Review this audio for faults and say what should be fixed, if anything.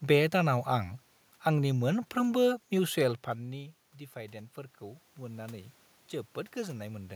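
From 3.37 to 5.8 s there is automatic gain rising. Around 3 s the talker moves away and the level at the microphone falls by about 15 dB, which is a normal event in itself. The gain control then responds by lifting its gain by about 5 dB over roughly two and a half seconds, so the voice and the room noise swell together. On the waveform the envelope ramps up steadily. On a spectrogram the noise floor between syllables brightens along with the voice. To prevent it, slow or cap the AGC's release, or fix the gain and keep the talker at a steady distance.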